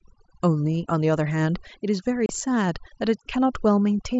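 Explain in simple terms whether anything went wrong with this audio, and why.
Two things went wrong in this speech recording.

The first runs through the whole clip. It is overdone noise removal. A cleanup tool was set too strong. It silences any frequency band it mistakes for background hiss, and quiet parts of the voice vanish with the noise. The background drops away and breaks up into twinkling specks.

The second is a brief gap at 2.26 s, lasting about 30 ms. This is unconcealed Bluetooth headset packet loss. The wireless link between headset and phone dropped a few tiny chunks of audio, which fits a handful of lost packets. Nothing tried to patch the hole. The voice simply cuts out for an instant, with sharp edges that can give a click. The wideband Bluetooth headset codec adds only a light graininess of its own.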